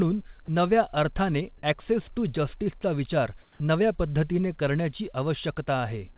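At 0.46 to 0.48 s, just before "नव्या अर्थाने ॲक्सेस टू", about 10 ms of speech briefly gives way to flat, steady noise. This is sound dropped by the voice detector, likely because the sender judged a quiet stretch to be background, stopped transmitting, and the receiver inserted comfort noise for those 20 ms.

From 3.42 to 3.6 s, right before "नव्या पद्धतीने करण्याची", the background turns smooth and featureless and drops by about 3 dB. That is comfort noise in place of the background: the sender likely paused transmission during this gap in speech, with the background about 31 dB below the loudest passages, and the receiver filled the 180 ms with synthetic noise. Across the clip the audio stops near 4 kHz, consistent with a G.711 mu-law call path.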